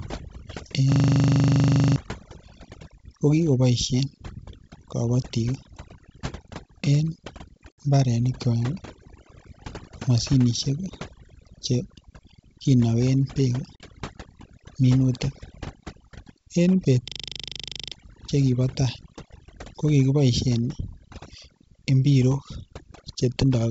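Overdone noise removal runs through the whole clip. The reducer was set too hard. It pulls single frequency bands down whenever they sit near its noise estimate. Quiet parts of the speech go with them. The background becomes near silence with twinkling specks.

At 0.92 s a system hang loop begins and lasts until 1.96 s. The machine froze while the audio hardware kept replaying its ring buffer. One 40 ms piece repeats 26 times at 25 Hz. It sounds like a rapid machine-gun stutter, and about a second of speech is lost.

At 7.74 s there is packet loss on the ADPCM call. A 60 ms hole cuts in with hard edges, which fits roughly three lost packets. The decoder's predictor and step size drift from the sender's. Speech returns slightly distorted before it settles.

A second ADPCM packet loss comes at 13.76 s, right after "kinogen bek". This gap is 40 ms, about two packets' worth. The same mismatch follows the hole, so the return is briefly rough before the decoder settles.

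The hang loop returns from 17.08 to 17.92 s. Again a 40 ms buffer cycles at 25 Hz, now 21 times. The same harsh stutter replaces roughly a second of speech.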